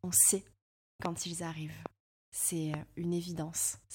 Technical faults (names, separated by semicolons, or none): loud pop